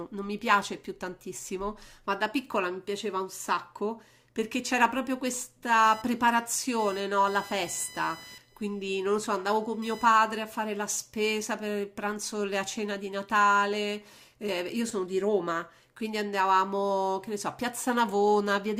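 Speech, with a stretch of computer activity noise from 5.83 to 10.78 s: a chirpy buzz around 1 kHz, roughly 25 dB under the voice, where computer load is disturbing the shared audio ground.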